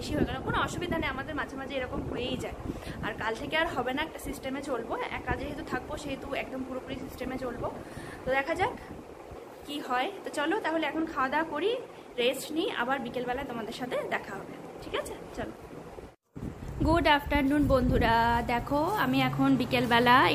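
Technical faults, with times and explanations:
No technical faults can be heard anywhere in this audio. There is no time to report and nothing to explain.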